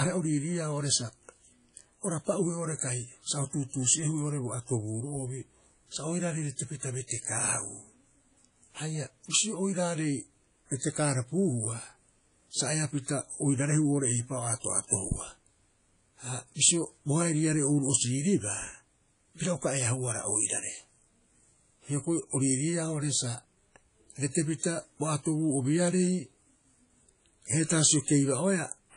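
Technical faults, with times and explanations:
Throughout, low-bitrate audio saved at a high bitrate: the speech was likely squeezed through a low-bitrate codec, something like 32 kbit/s WMA, and then re-encoded as a much larger MP3. That second pass cannot restore what the first one discarded. Nothing survives above about 10.1 kHz. The coding artefacts left by the first encoding remain despite the generous final bitrate.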